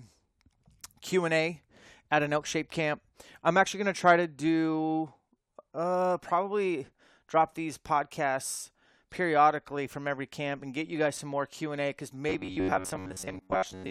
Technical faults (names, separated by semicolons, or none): robotic sound from repeated short buffers